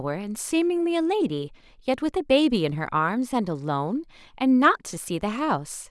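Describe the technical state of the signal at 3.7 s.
At 3.7 s the signal is intact, with no dropout, distortion, glitch or other fault audible in the speech at that moment.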